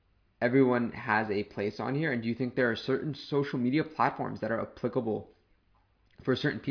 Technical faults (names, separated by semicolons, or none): none